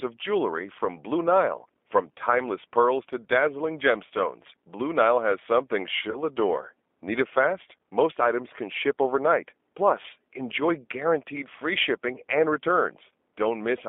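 G.729 codec damage runs through the whole speech clip. The sound is confined to a telephone band of about 250 Hz to 3.5 kHz, and it has the slightly rough, synthetic edge of a coder that rebuilds each frame from a vocal tract filter, a pitch predictor and a few pulses. The artefacts are plainly audible and fit the 8 kbit/s G.729A variant.

VoIP packet loss concealed by the speech codec occurs at 4.07 to 4.11 s, right after "timeless pearls to dazzling", and again at 6.11 to 6.19 s, after "has something". Each time about 30 ms of audio went missing, which fits a single lost packet. The decoder filled the gap by extending its last pitch and filter with falling gain. That gives a brief stretched, fading stretch that lingers weakly until the frame history recovers.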